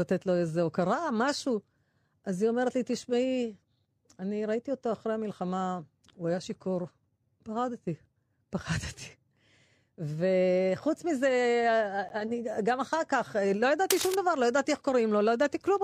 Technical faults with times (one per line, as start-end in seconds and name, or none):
6.09 gap between stream segments
12.09 gap between stream segments
13.90-14.15 cable scratch noise